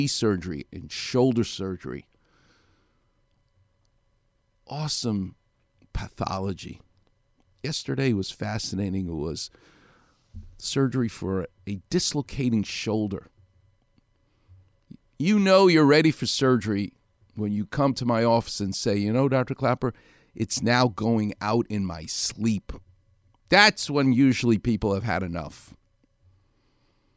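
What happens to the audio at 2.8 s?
Nothing goes wrong at 2.8 s; the speech carries on intact there, with no dropout, click, distortion or other fault at that moment.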